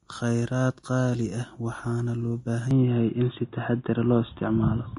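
Vorbis compression runs through the whole speech clip and is the likely cause of the plainly audible codec damage. At this setting the encoder removes everything above about 10.5 kHz and quantises what remains of the treble so coarsely that fine detail turns into noise of similar energy. The result is hissy, grainy high frequencies with roughened tones and softened attacks, which fits a low bitrate of around 28 kbps.

At 2.71 s the sound changes character, most likely because the input switched to a poorer device, and the change lasts until the end. There is no gap at the switch. From that point nothing above 3.8 kHz gets through, so the top of the spectrum drops away at once. The overall level shifts by roughly 5 dB, and a new background noise appears far below the signal, at roughly 55 dB down.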